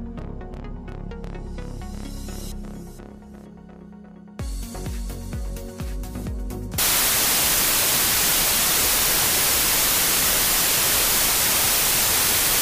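At about 6.78 s, running to the end at 12.61 s, there's a wrong sample width fault. It sounds like 24-bit samples being read two bytes at a time, so many values are built from mismatched bytes. You get loud noise with the sound buried underneath, slowed to about two-thirds speed and lower in pitch.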